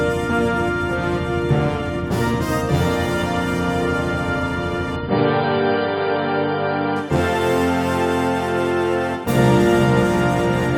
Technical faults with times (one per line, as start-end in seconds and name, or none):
4.96-6.96 adaptive stream at a lower bitrate